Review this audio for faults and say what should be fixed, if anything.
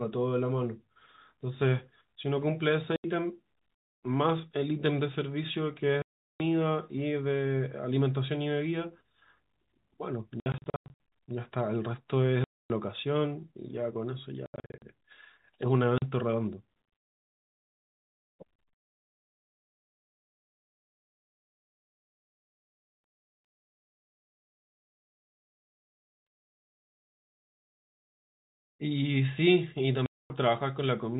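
Packet loss filled with silence cuts the speech at 2.96–3.04 s, 6.02–6.40 s, 10.40–10.97 s, 12.44–12.70 s, 14.46–14.82 s, 15.98–16.02 s and 30.06–30.30 s. Every gap is a multiple of 20 ms, which fits 20 ms packets, and at 10.4 s and 14.5 s the holes are scattered in short runs. Unlike concealed loss, nothing fills these holes: the sound drops to dead silence with hard edges, while the G.711 telephone band stays intact either side. A jitter buffer with packet loss concealment, plus forward error correction on the link, would prevent it.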